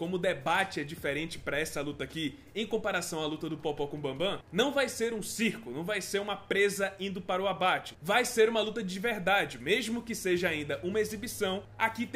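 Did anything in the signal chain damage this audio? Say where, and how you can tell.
No, nothing stood out on listening that would point to damage at any stage of the signal chain.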